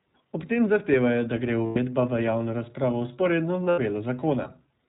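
Speech passed through the iLBC codec, most likely in its 20 ms frame mode, so nothing above 4 kHz survives and the excitation coding leaves the voice plainly rough and slightly synthetic throughout. Lost iLBC frames then knocked out about 100 ms at 1.66 to 1.78 s and about 80 ms at 3.70 to 3.80 s. The decoder filled each hole by repeating the last pitch cycle mixed with noise, giving a brief held, buzzy vowel before the voice snaps straight back.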